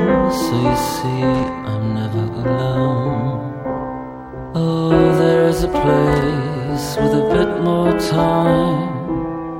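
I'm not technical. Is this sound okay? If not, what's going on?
No. There is loose connector crackle at 1.34 to 1.51 s and 6.13 to 6.30 s. A worn plug or socket briefly loses contact, causing short scratchy bursts.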